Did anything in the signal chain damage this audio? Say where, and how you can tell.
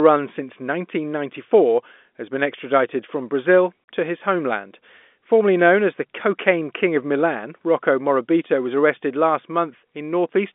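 Yes, at the network stage. At 3.84 s the speech cuts to dead silence for 40 ms, just before "to his homeland", with hard edges. This is packet loss filled with silence. The gap fits two lost 20 ms packets that the receiver muted rather than concealed.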